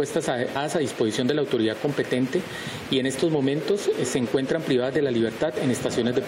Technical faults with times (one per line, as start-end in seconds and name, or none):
0.55 compressed frames skipped